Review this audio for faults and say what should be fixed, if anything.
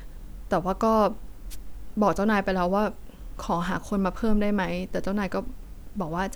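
Wireless microphone noise hit, 1.50 to 1.56 s: the FM radio link faded as reflected signals cancelled, letting receiver noise surge briefly into a short burst of static over the speech. To prevent it, use diversity receivers, keep a clear line of sight between transmitter and antennas, and shorten the distance to the receiver.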